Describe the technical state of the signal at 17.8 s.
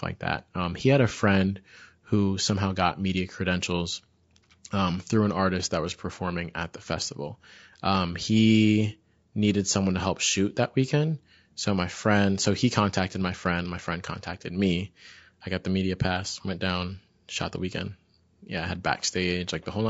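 At 17.8 s the speech sounds rough and grainy, with noise filling the gaps between pitch harmonics and a synthetic-sounding top band, as it does across the whole clip. This is likely low-delay AAC compression, consistent with AAC-ELD near 32 kbps, whose short frames resolve harmonics poorly.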